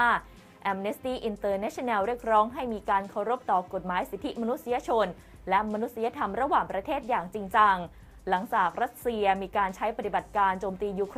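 No technical faults can be heard anywhere in the recording, and the signal stays steady and intact throughout.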